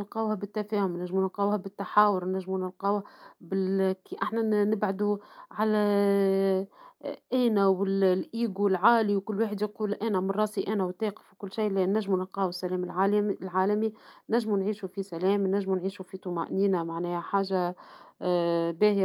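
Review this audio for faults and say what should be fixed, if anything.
No faults found in the speech, so nothing needs fixing.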